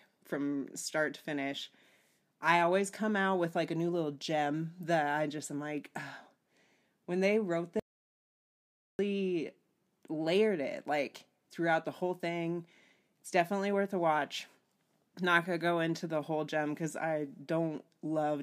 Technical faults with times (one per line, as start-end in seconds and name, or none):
7.80-8.99 audio dropout to silence